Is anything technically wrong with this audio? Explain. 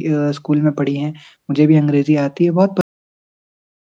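Yes, the speech has a cut-off end. At 2.81 s the final buffers were never written or played back, so the audio halts mid-sound and drops straight to digital silence with no natural decay, staying silent until the clip finishes.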